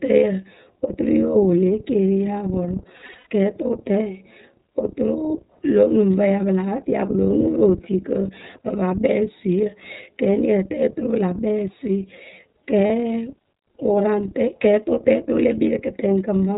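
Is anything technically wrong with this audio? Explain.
Yes. The whole clip carries iLBC codec coding: speech is bandlimited below 4 kHz and sounds slightly rough and synthetic, because each frame's excitation is coded independently. The plainly audible damage fits the 13.33 kbps mode with 30 ms frames.

There are also lost iLBC frames. From 2.97 to 3.26 s, about 210 ms of audio drops out in scattered gaps, the longest about a tenth of a second. At 12.87 to 12.91 s, a single 30 ms frame is missing. The decoder fills each gap by repeating the last pitch cycle mixed with noise, which sounds like a briefly held, buzzy vowel. Because the frames are independent, speech resumes immediately afterwards.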